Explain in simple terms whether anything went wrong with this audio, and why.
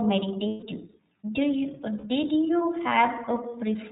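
The speech sounds thin and muffled, a little rough and machine-like throughout. That comes from the iLBC codec, a phone-call format that cuts out everything above 4 kHz and rebuilds each 30 ms slice of speech separately, so here the damage is plainly audible.

At 0.48 to 0.64 s, and again at 1.98 to 2.04 s just before "did you", the voice briefly becomes a held, buzzy, breathy hum. Those are lost iLBC frames: pieces of the stream went missing, and the decoder repeated the last sound with noise mixed in to fill the gap.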